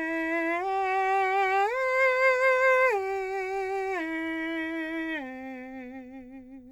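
Two unsynchronised clocks likely drift apart, dropping or repeating single samples: from 0.39 to 6.31 s, faint clock slip clicks tick roughly every 0.7 s.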